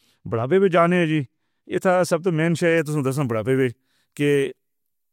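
From 2.78 s to the end, the speech turns thin, glassy and hissy because pre-emphasis was left on. The treble lift applied before transmission was never undone by the matching de-emphasis, leaving 10 kHz about 11 dB above 1 kHz, a rise that fits a 50 µs FM curve. Unlike distortion or aliasing, nothing new is added. The existing sibilants simply grow steadily brighter the higher they sit.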